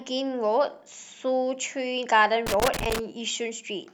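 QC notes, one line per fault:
2.47 to 2.99 s, loose connector crackle. For about half a second the speech breaks into an irregular burst of scratching and crackle. A worn or dirty contact is making and breaking as it shifts. That chops the signal on and off, and any DC on the line adds pops at each break.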